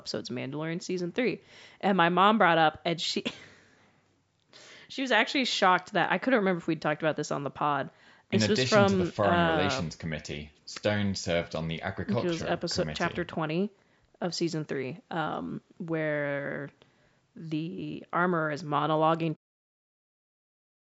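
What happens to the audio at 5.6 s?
Nothing goes wrong at 5.6 s: the speech continues intact through that moment, with only the normal low-cut and band limit of the call's microphone processing.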